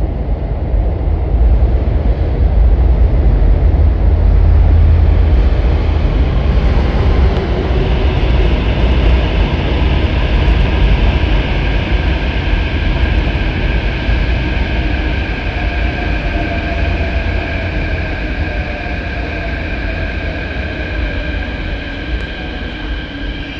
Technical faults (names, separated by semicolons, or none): none